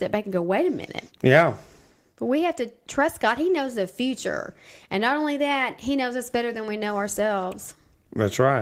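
A speech recording, and nothing is technically wrong with it.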